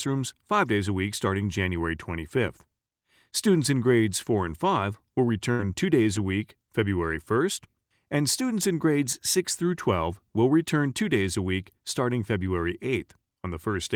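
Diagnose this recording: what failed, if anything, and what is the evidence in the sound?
Network stage: a burst of packet loss at 5.51 to 5.61 s. Concealment holds and fades the sound for 73 ms, and 80 ms is skipped. A spectrogram shows a smeared, decaying sound, then a jump.

Network stage, recovered in the codec: lost packets rebuilt from error correction at 5.59 to 5.61 s and at 6.15 to 6.17 s, just before "a week". Each 20 ms frame is rougher and noisier.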